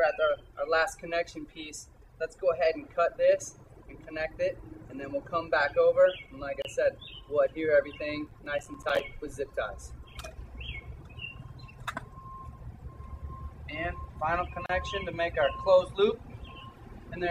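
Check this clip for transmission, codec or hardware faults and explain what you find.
Two kinds of fault turn up: two short join gaps and one burst of overload crackle.

At 6.62 s and again at 14.66 s there's a gap at a join of encoded pieces, about 29 ms and 34 ms of silence. The pieces were encoded separately and stitched without trimming the encoder's start delay and end padding, so the sound briefly drops out with smeared edges, then picks up where it left off.

From 8.27 s to 9.0 s you get processor overload crackle. The processor kept missing its buffer deadlines, and each miss dropped in a tiny slice of silence. The spacing fits buffers of around 5 ms, with a dozen or more misses, heard as a gritty crackle riding on the sound until the load eases.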